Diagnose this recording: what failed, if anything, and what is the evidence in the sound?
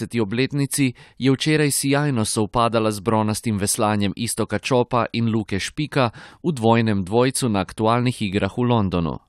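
No fault is audible here.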